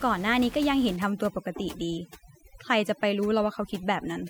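From 0.96 s to the end at 4.30 s, the gaps around the speech fall to near silence flecked with twinkling specks. This is overdone noise removal. The room noise, about 19 dB below the speech, was handled too aggressively: individual frequency bands close to the tool's noise estimate were pushed almost to zero, and the quieter parts of the speech were stripped away with them.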